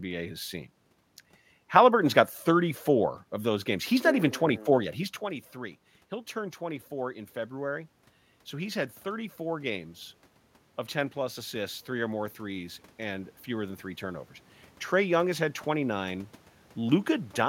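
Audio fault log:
10.93–14.32 s, automatic gain rising: The speech and the room noise swell together by about 4 dB over roughly three and a half seconds. The gain control judged the input too quiet. It raised its gain slowly, lifting everything at once.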